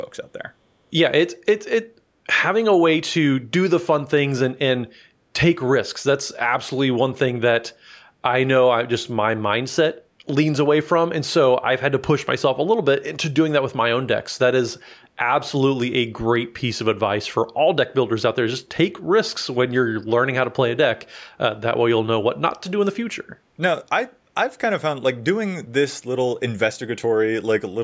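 From 10.04 to 10.18 s, background gated by the echo canceller drops the room sound by about 8 dB. It dips briefly, then returns.

From 14.87 to 15.07 s, a very faint speech copy arrives 405 ms late. This is likely an echo leak from a far-end loudspeaker the canceller missed.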